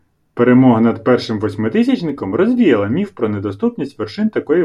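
At 2.09 s, just before "розвіяла міф про", a block of digital silence drops out of the speech for about 0.73 ms, which fits a 32-sample block left unfilled. The abrupt cut and return are heard as a tick or dip, seen as a flat gap in the waveform and a thin vertical broadband line on a spectrogram.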